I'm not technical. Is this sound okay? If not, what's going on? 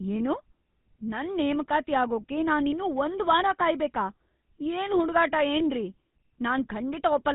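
No. The speech has been through the GSM full-rate codec, an old mobile-phone format, from start to finish. It rebuilds the voice from a simple model driven by regular pulses, which gives it a buzzy, gravelly roughness. It also removes everything above about 3.8 kHz, so the voice sounds thin and phone-like. A plain phone filter would sound just as thin but smooth. That constant grainy buzz is what identifies this codec.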